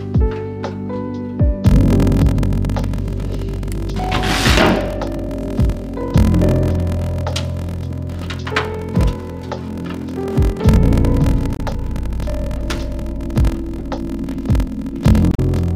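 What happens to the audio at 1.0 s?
Nothing goes wrong at 1.0 s: the audio there plays straight through with no dropout, click, distortion or other fault.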